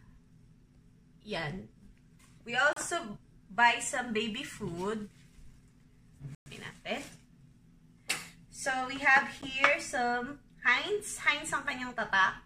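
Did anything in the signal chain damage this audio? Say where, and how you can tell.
Yes. The playback stage shows three short cuts to silence, at 2.73 to 2.77 s (32 ms), 6.35 to 6.46 s (112 ms), and a 10 ms gap at 9.42 s. Each is a clean hole with no concealment smear or codec warbling around it, which points to a likely Bluetooth stall: the headphones' buffer emptied while delayed packets were resent. Gaps of irregular length and spacing fit radio interference better than a steady driver underrun.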